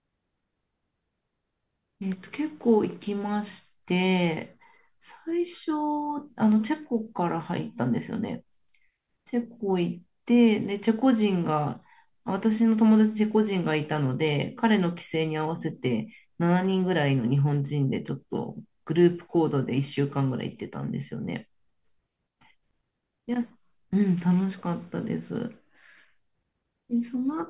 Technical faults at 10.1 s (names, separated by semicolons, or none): none